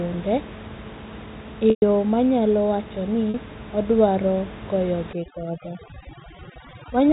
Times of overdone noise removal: 5.13-7.12

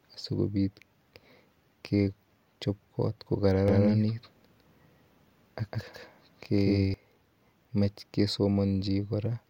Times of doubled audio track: 3.68-6.94

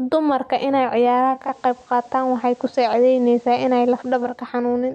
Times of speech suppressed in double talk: none

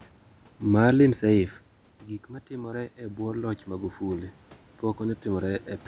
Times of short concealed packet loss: 2.70-2.74

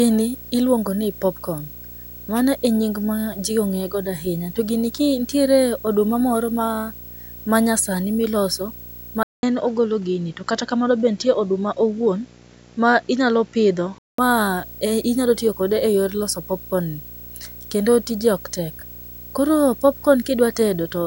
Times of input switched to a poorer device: 9.23-14.18

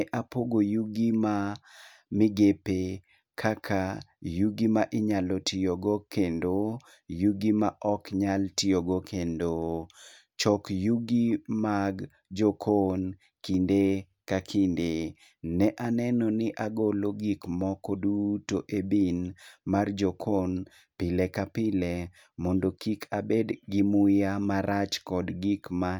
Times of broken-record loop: none

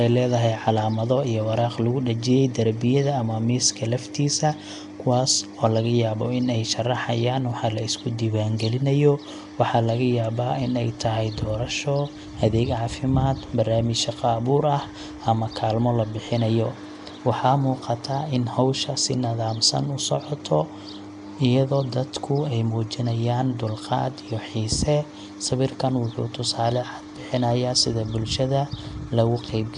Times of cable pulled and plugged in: none

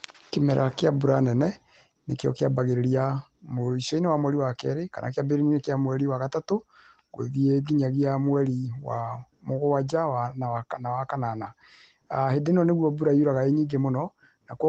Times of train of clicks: none

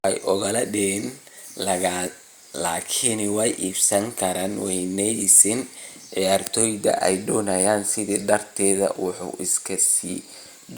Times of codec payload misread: none

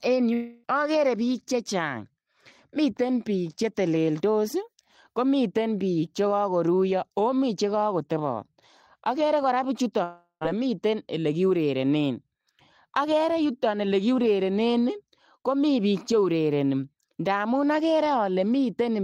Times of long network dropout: 0.33-0.65, 10.03-10.43

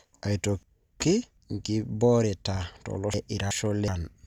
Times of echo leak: none

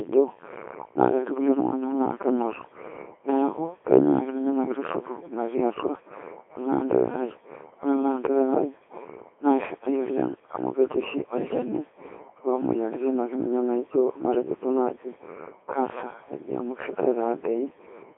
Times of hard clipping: none

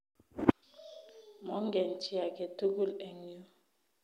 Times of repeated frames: none

